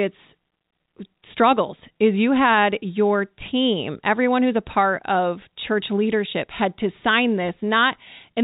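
Nothing stood out as a technical fault on listening to this speech recording, which has the narrow telephone-band character of G.711 coding.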